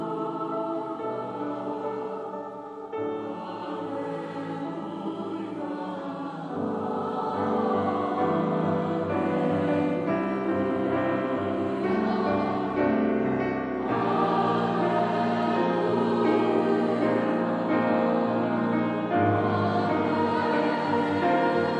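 Nothing in the clip stands out as a technical fault, and it runs along without any dropouts, glitches or other trouble worth pointing to.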